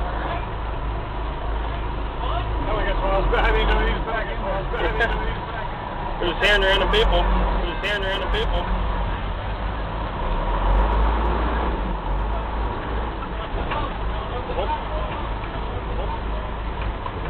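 From the start, there's a doubled audio track: a second copy trails about one and a half seconds behind, a bit quieter, likely from a slower second capture path or an edit.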